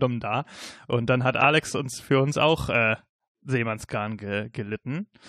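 Speech with no audible faults.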